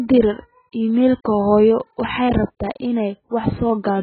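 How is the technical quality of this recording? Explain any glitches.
The technical quality is poor, with two separate faults.

Throughout the clip, the speech sounds dull and smeared, with a watery, warbling texture and nothing above 4.5 kHz. This is likely heavy AAC compression. At a very low bitrate, probably around 12 kbps, the AAC-LC encoder runs short of bits. It discards the upper spectrum entirely and quantises what remains so coarsely that the detail in the voice blurs and flutters.

From 0.11 s to 3.90 s, a steady tick sounds about every 0.1 s, about forty in all, and is heard only where there is signal. These are periodic USB or driver dropouts. At a fixed interval something stalls the audio path, and a tiny sliver of the stream, well under a millisecond, is skipped rather than played. The sudden jump in the waveform at each gap is what produces the regular click.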